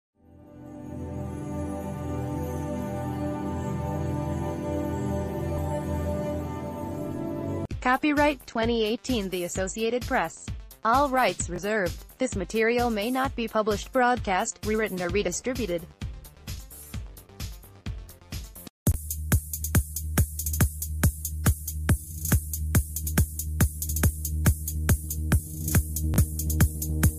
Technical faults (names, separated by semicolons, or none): repeated buffer